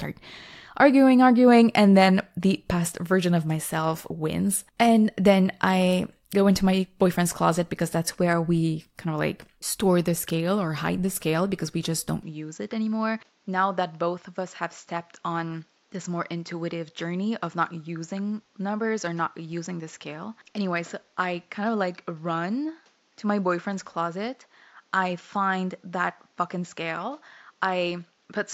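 At 12.23 s, right after "because we just don't", the speech abruptly loses everything above 7.6 kHz and stays that way to the end. It turns duller and boxy, drops by about 5 dB, and a faint new background noise appears. There is no gap at the change. The likely cause is an input switched to a poorer device. A simple filter or codec bandwidth drop would cut treble alone, but here tone, level and noise change together.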